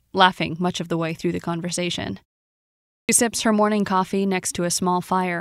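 At 3.0 s, "sips her morning coffee" bursts out of silence with its opening sound missing, about 88 ms swallowed: a clipped start after a pause, as the output device woke from the 0.83 s gap. At 4.78 s, just after "sips her morning coffee", a tiny skip marks an overlap between stream segments, where overlapping time stamps, consistent with 2-second segments, had sound trimmed away.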